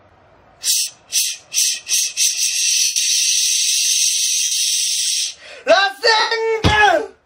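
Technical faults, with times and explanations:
0.79–0.87 s, 2.84–2.96 s, 4.44–4.52 s and 6.20–6.32 s, lost LE Audio frames: the Bluetooth link dropped 75, 120, 75 and 112.5 ms of audio, a pattern that fits 7.5 ms LC3 frames. The decoder filled each gap by replaying the last spectrum with scrambled phase and fading it, so the sound blurs into a noisy smear that sags in level before returning.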